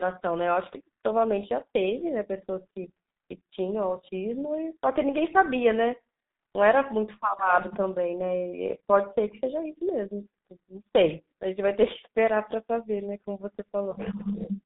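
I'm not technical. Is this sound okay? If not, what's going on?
No. Throughout, the speech sounds muffled and hoarse, with blurry consonants and nothing above about 3.8 kHz. This is G.723.1 codec damage, from an old internet-phone format that squeezes speech into very little data and rebuilds it roughly, a short slice at a time.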